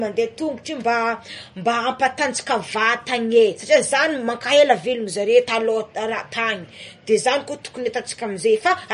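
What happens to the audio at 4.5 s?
At 4.5 s the speech sounds watery and swirly with no treble above 10.5 kHz, as it does throughout; likely MP3 compression starved of bits, fitting roughly 40 kbps.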